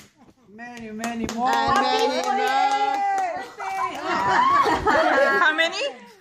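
No audible technical faults.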